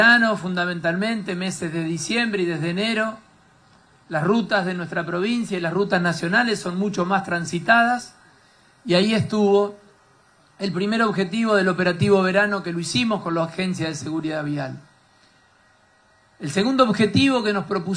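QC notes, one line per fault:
No faults heard in this audio.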